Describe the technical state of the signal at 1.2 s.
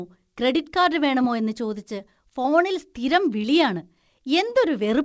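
At 1.22 to 1.25 s there is a short concealed packet loss: about 20 ms of the call arrived too late, and the receiver papered over the gap by extending the preceding sound before blending back. This produces a brief smear rather than the hard silence of a plain dropout.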